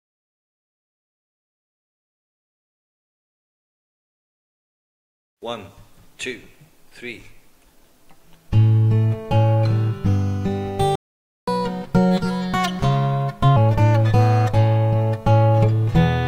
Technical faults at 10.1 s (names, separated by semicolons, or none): none